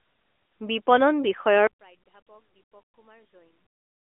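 From 1.67 s to the end, the speech falls by about 33 dB to a faint residue. The likely cause is one channel inverted, so the matching left and right signals cancel in mono. The waveform shrinks to a near-flat trace and the spectrogram fades almost blank.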